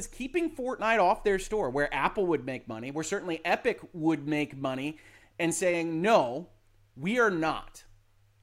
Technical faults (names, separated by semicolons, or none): none